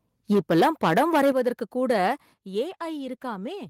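From 0.31 to 1.49 s there's microphone overload: the peaks run about 9 dB past full scale and roughly a tenth of the samples get their tops sliced flat, so the loud syllables crackle harshly. The input gain was likely set too hot for the converter.

Right inside that stretch, the microphone volume steps down at 0.33 s by about 2 dB and again at 1.32 s by about 8 dB. Each is a sudden drop in level for the talker and the room alike, likely the call software pulling the device gain after catching the distortion.

A shorter overload follows from 1.90 to 2.08 s, about 4 dB over, with a small share of samples clipped, so the edge is lighter. Then at 2.34 s comes another step down of about 6 dB.

From 2.67 s to the end there's a call bitrate drop, from 32 to 18 kbps. The encoder has fewer bits to work with, so the speech turns coarser, watery or muffled, and it doesn't recover before the clip ends.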